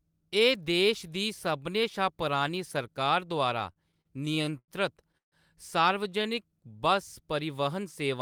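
From 3.59 to 4.7 s, just after "शा पुरानी सरकार द्वारा", packets kept arriving late and the jitter buffer drained eleven times, causing repeated stalls (stutter). The receiver stretched the last sound over each gap, about 246 ms in total and up to 90 ms at once. Nothing is lost, but the speech drags and stutters.

At 5.17 to 5.34 s there is a call audio freeze. Packets were likely held up in transit, emptying the buffer. About 146 ms was filled, mostly as near-silence for roughly 130 ms, before the speech resumes where it stopped.

From 6.18 to 6.50 s, a jitter buffer slow-down occurs. The buffer rebuilt its reserve by repeating single pitch periods or bits of pauses, adding 36 ms. The speech runs at 91% speed with unchanged pitch, so sounds are slightly drawn out.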